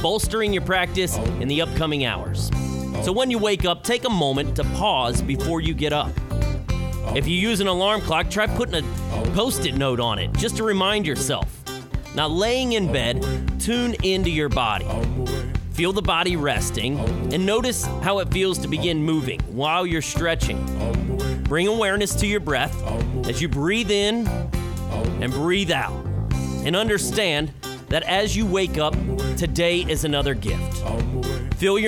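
No technical faults can be heard anywhere in the clip. There is nothing in the sound that needs a timestamp or an explanation.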